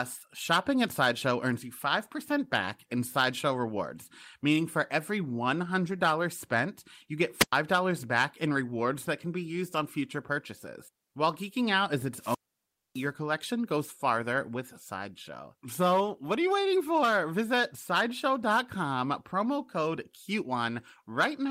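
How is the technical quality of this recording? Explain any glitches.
Two wireless microphone squelch dropouts break the speech. At 7.38–7.53 s, after "spent you get", and at 12.15–13.11 s, after "geeking out is", the FM radio signal fades. Hiss rises, then the receiver's squelch mutes the output for 104 ms and 611 ms before "back in rewards that" and "collection goes farther with".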